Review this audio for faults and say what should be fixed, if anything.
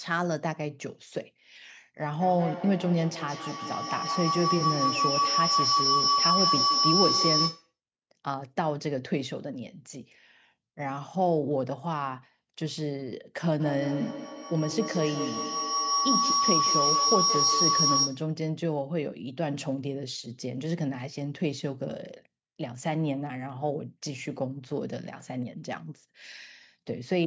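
Feedback howl appears twice in this speech, from 2.2 to 7.73 s and from 13.6 to 18.33 s. Each time, a loop from a loudspeaker back into a microphone gained level on every trip. The repeats grew until a tone near 5 kHz peaked about 4 dB, then about 3 dB, above the speech, pulsing at an interval of around 150 ms. A spectrogram would show a bright horizontal line near 5 kHz, beaded at that interval, and the waveform would show a swelling envelope with the same rhythm. To prevent it, mute one of the two devices in the room, or use headphones.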